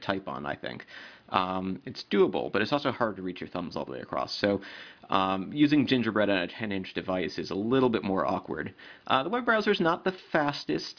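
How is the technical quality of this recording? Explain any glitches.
The technical quality of this recording is good, with no glitches to explain.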